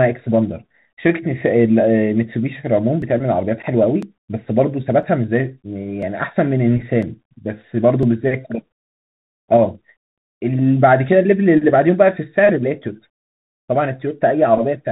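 Throughout, the speech has passed through a Bluetooth CVSD headset codec: one-bit delta coding caps the band near 4 kHz, roughening sibilants and adding granular hiss.

From 3.02 to 9.02 s, periodic USB or driver dropouts skip about 2 ms of audio once a second, giving roughly seven regular ticks.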